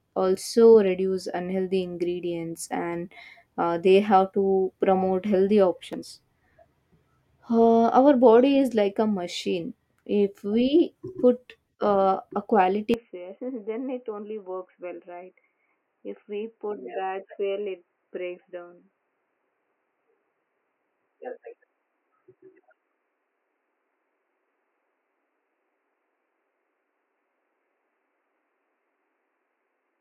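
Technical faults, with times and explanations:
12.94–30.00 s, input switched to a poorer device: right after "we put uh a" the speech abruptly goes dull and boxy and stays that way to the end, with nothing getting through above 3 kHz, the level dropping by about 10 dB, and a new, quiet noise floor sitting well under the speech. There's no gap at the change. That sudden, lasting shift in bandwidth, level and background is most likely the recording jumping to a different, narrower-band microphone or headset mid-take.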